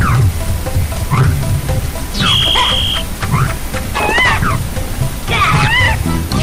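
Hard clipping runs through the whole clip: the signal is driven about 9 dB past what a stage in the chain can pass, so its peaks are sliced flat. Around one sample in twenty sits on that ceiling, and the squared-off tops add high harmonics heard as harsh fuzz on the loud parts of the audio.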